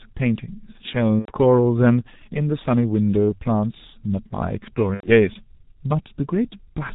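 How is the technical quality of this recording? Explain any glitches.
The recording has poor technical quality: the speech is band-limited and rough throughout, and it breaks up twice.

Throughout, the speech sounds muffled and hoarse, with smeared consonants and nothing above 4 kHz, the signature of the G.723.1 codec. Its slow 30 ms frame updates and very low bitrate, consistent with 6.3 kbit/s, leave the voice model too coarse to track fast articulation.

From 1.19 to 1.32 s and again from 4.94 to 5.12 s, the speech is stretched into a fading sound and stays weak just afterwards. This is VoIP packet loss concealed by the speech codec. The decoder extends its last pitch and filter across the missing audio, which fits about three lost 30 ms frames, and recovers gradually.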